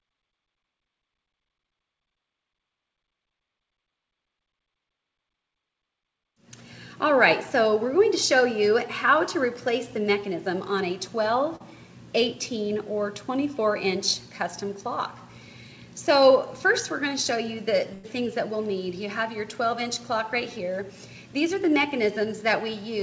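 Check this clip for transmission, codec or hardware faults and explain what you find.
Two transmission faults are present, both losses of audio packets on the way to the receiver. The audio travels a call path with nothing above 8 kHz, which fits G.722 at 64 kbps.

Short concealed packet loss, 11.56 to 11.62 s: about 40 ms of audio never reached the decoder in time, and the receiver covered 39 ms of that gap by extending the preceding sound, copying its pitch if it was tonal or substituting shaped noise if not, before crossfading back into the real signal. The result is a brief smear or wobble, and a short transient at that point can disappear.

Burst of packet loss, 17.94 to 18.05 s: a longer run of audio, about 100 ms, was lost or arrived too late to play. The receiver filled 96 ms by continuing the last sound while fading it down, so a tonal sound becomes a held buzz and a noisy one a hiss that dies away. 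The audio then picks up further along, and whatever fell inside that tenth of a second is gone.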